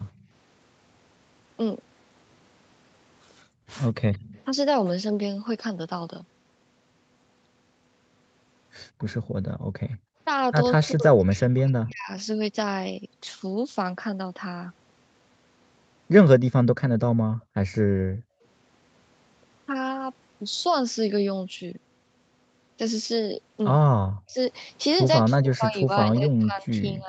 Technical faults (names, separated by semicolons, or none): echo leak; background gated by the echo canceller; speech suppressed in double talk